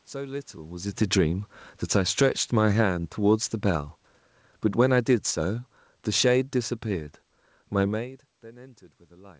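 Automatic gain falling in this speech clip, from 1.76 to 3.93 s and 4.63 to 7.16 s: the gain control judges the input too loud or its background too strong and eases level down by about 5 dB, then about 4 dB, background sinking along with it.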